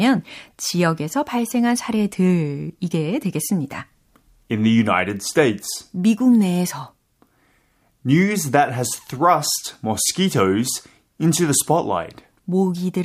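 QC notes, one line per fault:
No fault to log in these QC notes.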